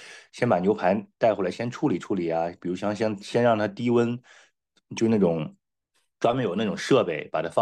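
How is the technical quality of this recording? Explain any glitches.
There's one glitch worth flagging: a corrupt frame decoded at about 4.95 to 4.99 s in the speech. Flipped bits in a couple of compressed frames got played anyway, so misread gains and codes throw energy into the wrong frequencies, giving a brief chirp, squeak, blip or burst of noise peaking around -25 dBFS.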